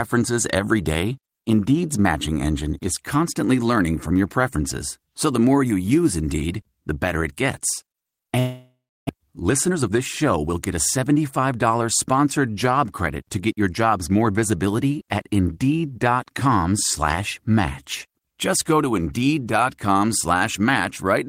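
From 8.39 to 9.11 s the speech gives way to a buzzy continuation of the last sound that fades into about 300 ms of silence, and resumes with roughly 400 ms lost, most likely a long network dropout. The decaying buzz separates it from a simple mute.

From 9.19 to 11.89 s a jitter buffer speed-up follows: the receiver trims tiny pitch-period pieces to shed the added delay, around 300 ms in all, so speech runs at 110% and sounds hurried while the pitch stays unchanged, unlike a resampling error.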